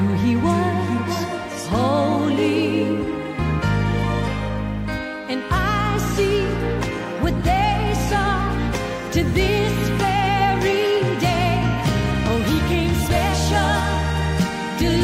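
No technical faults can be heard anywhere in the audio, and the signal stays stable and continuous throughout.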